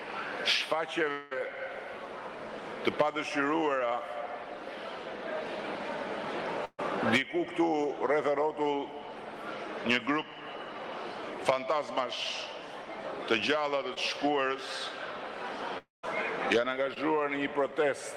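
The recording has three kinds of transmission fault, all from audio that failed to reach the decoder and was patched by the receiver. From 1.11 to 1.33 s and from 15.78 to 16.05 s there are two gaps with the character of a long network dropout, likely from the link stalling for about 200 ms and 260 ms. In the first, the receiver stretches the last sound across almost the whole hole as a decaying buzz or hiss with no true silence. In the second, the fill fades out and leaves about 150 ms of silence before the audio resumes further on. At 6.65 to 6.80 s a burst of packet loss removes about 140 ms. The receiver holds and attenuates the preceding sound for roughly 130 ms, so a voiced sound turns into a steady buzz and other sounds into a dimming hiss, and the last 40 ms or so go silent. The audio then picks up past the missing section. Two short concealed packet losses fall at 13.94 to 13.98 s and 16.94 to 16.98 s, each about 20 ms missing. 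Here the decoder extrapolates the last pitch or shaped noise for a couple of hundredths of a second and cross-fades back into real signal. Each leaves a small smear or wobble, and a brief transient at that point can drop out entirely.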